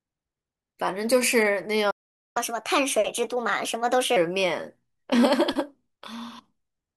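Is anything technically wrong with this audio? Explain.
Yes, there are two related faults. First, a playback stall at 1.90 s. The speech cuts off mid-flow and the output is silent until 2.37 s, a gap of about 448 ms. The likely cause is that the player's buffer ran dry or its audio thread was briefly blocked, so nothing reached the output. On a waveform this is a flat line between abruptly truncated and resumed speech. A spectrogram shows a clean vertical band of empty energy across all frequencies.

Second, a catch-up at higher speed runs from 2.37 to 4.16 s. After resuming, the player works through its accumulated backlog by resampling at 1.25 times normal speed. Because resampling shifts frequency along with tempo, the speech sounds hurried and raised in pitch by roughly four semitones, then snaps back to normal at 4.16 s. On a spectrogram, harmonics and formants sit visibly higher through that stretch, and syllables are compressed horizontally. 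In the waveform, the periodic cycles are shorter and more closely packed.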